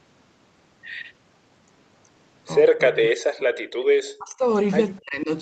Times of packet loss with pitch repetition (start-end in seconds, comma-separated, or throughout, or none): none